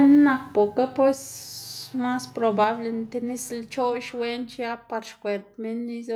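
From 0.04 to 0.15 s the loudest peaks of the speech sound flattened and gritty, a harsh crackle riding on the syllable rather than a separate click. This is microphone overload, likely from the input volume being set high enough to drive the converter past its limit. The excess is small, about 1 dB, and only around one in twenty samples are cut, so it is a brief edge, unlike the constant fuzz of distortion in the whole signal chain.

Right after, at 0.15 s, the level falls abruptly by about 3 dB. It falls again at 1.14 s by about 5 dB and at 2.64 s by about 4 dB. These are microphone volume step-downs, likely the call software reacting to a microphone it judged too loud or clipping by cutting the device's input gain. Voice and room noise drop together in single clean steps with no recovery, which separates this from a compressor or noise suppressor that pumps and releases or affects only the background.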